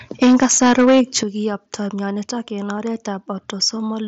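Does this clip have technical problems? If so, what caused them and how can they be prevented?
Yes. Microphone overload runs from 0.22 to 1.18 s. The loudest syllables have a harsh, crackly edge because their peaks were flattened at the converter's ceiling. The level was likely set about 8 dB higher than the converter could pass, so roughly a seventh of the samples in that stretch were cut off. Once the tops of the waveform are sheared off, they cannot be recovered afterward. Lowering the microphone's input gain until the loudest peaks stay a few decibels below full scale prevents this.

A microphone volume stepped down event occurs at 0.23 s and again at 1.23 s. The whole signal, speech and background alike, drops abruptly in level: by about 3 dB the first time and by about 10 dB the second time, just after the distorted passage ends. This is likely the call software's automatic gain control cutting the device input volume in single steps after it detected clipping. 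Setting a sensible input level beforehand, or turning off automatic microphone adjustment, avoids these sudden drops.

Concealed Bluetooth headset packet loss appears at 0.65 s and at 2.77 s, just after "myonitok en". At each point a short piece of audio went missing on the headset link, and the receiver filled the gap by repeating the best-matching recent waveform. The first gap lasts 7.5 ms, which points to a single lost frame, and it is nearly inaudible. The second lasts 15 ms, about two frames, and leaves a buzzy smear with a small warble where the real signal resumes. The wideband mSBC codec on that link shows only light graininess. Keeping the headset close to the phone with no obstructions, and away from Wi-Fi congestion, reduces these dropouts.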